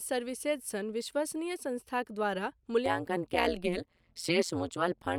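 From 2.86 s to the end, overlap-add ripple: the speech was split into windowed frames and rejoined with an overlap whose gains don't sum evenly, so the level swings by about 60 dB once per frame, around 150 times a second, giving a harsh, robotic metallic buzz.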